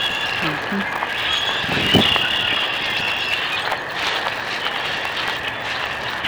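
From start to finish there's a filter restarted on every block: it drops its state at each 5 ms block boundary and starts from silence, so every block opens with a small transient. You hear it as a 200 Hz buzz that rises and falls with the signal's level.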